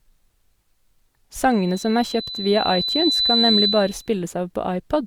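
From 1.50 s to 4.11 s, loudspeaker feedback squeal: a microphone is picking up its own loudspeaker, and at 4 kHz the loop gain exceeds unity. A single tone swells over roughly two seconds until it sits a few dB above the speech, then stops.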